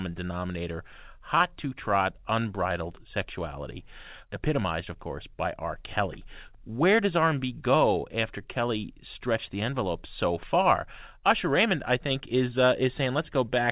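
Speech recorded through a call connection, with nothing technically wrong to report. The audio stops at 4 kHz, which fits a narrowband G.711 mu-law call path working as intended.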